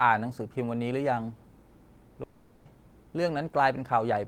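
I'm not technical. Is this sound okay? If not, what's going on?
No. There is a long network dropout from about 2.23 to 2.68 seconds. For just under half a second, the speech is replaced by a fading buzzy hiss. The receiver was stretching the last bit of sound to cover the hole. When the speech returns, that stretch is simply gone and does not come back. The likely cause is the connection briefly stopping delivering audio.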